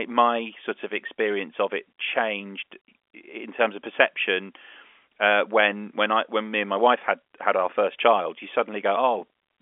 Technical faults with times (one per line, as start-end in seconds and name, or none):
none